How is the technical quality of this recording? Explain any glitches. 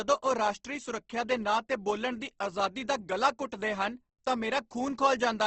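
The recording has clearly audible codec damage across its full length. Opus compression: throughout the speech, nothing sounds above 8.2 kHz, and tones come out grainy and rough, likely from Opus encoding at a low rate, around 16 kbps, with band filling.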